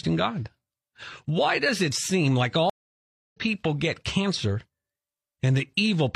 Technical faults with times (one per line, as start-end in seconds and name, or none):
2.70-3.36 stream reconnect